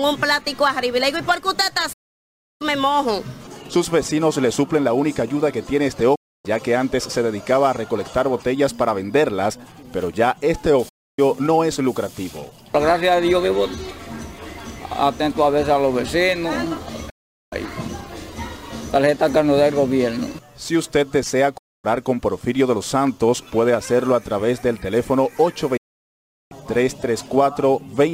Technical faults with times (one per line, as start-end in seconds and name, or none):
1.93-2.61 digital broadcast dropout
6.15-6.45 digital broadcast dropout
10.89-11.19 digital broadcast dropout
17.09-17.53 digital broadcast dropout
21.57-21.85 digital broadcast dropout
25.77-26.52 digital broadcast dropout